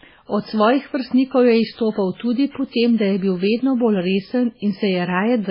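Throughout, the encoder seems starved of bits, which points to a very low bitrate around 16 kbps. This is likely MP3 compression: the treble is cut off above 5.3 kHz and weak frequency lines drop in and out between frames, so the speech sounds heavily watery, swirly and dull.

Pre-echo occurs from 2.51 to 2.55 s, just before "po tem da je", and from 2.71 to 2.74 s, between "tudi po" and "tem da je bil". Quantisation noise spreads back ahead of the sharp attacks by 44 ms and 31 ms, so each onset is preceded by a brief hiss and sounds smeared.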